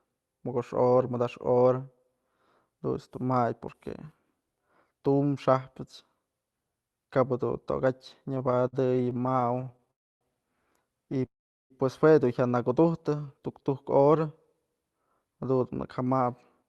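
From 8.35 to 9.91 s there's repeated stalling, a stutter: packets kept arriving late, the buffer ran dry 35 times (longest gap 55 ms), and about a quarter of that stretch is patched-over sound, so it drags and hiccups. Right after, 9.91 to 10.23 s is a call audio freeze, roughly 0.3 s of near silence, likely from packets held up in transit, after which the speech picks up where it left off. The same pair repeats: a brief stutter from 11.12 to 11.26 s (four tiny gaps, longest 8 ms), then a freeze from 11.26 to 11.72 s, about 0.45 s, mostly silent. Between 13.03 and 14.08 s there's a jitter buffer slow-down: the receiver repeated pitch periods to rebuild its reserve, adding 117 ms, so the speech runs at 90% speed at the same pitch, slightly stretched. Finally, from 15.54 to 16.22 s a jitter buffer speed-up trims about 50 ms of pitch periods to cut delay, pushing speech to 106% and making it sound a touch hurried.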